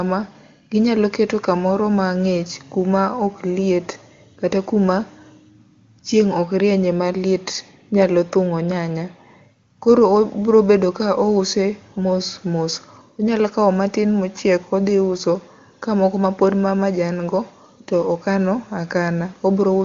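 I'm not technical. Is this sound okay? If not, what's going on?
Yes, the speech is in good technical shape: it has been carried by the AMR wideband (HD Voice) phone codec at one of its higher quality settings, which is why the sound extends only up to about 7 kHz, the normal ceiling for that kind of call audio.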